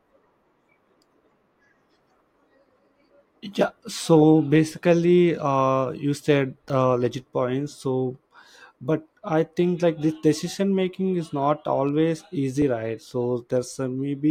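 Dropped buffers (overrun) at 6.7 s, after "you said", and 12.62 s, after "making is not always", in this speech clip: each is a jump where roughly ten milliseconds of audio vanish and the two sides butt together, likely because samples weren't collected before the hardware overwrote them.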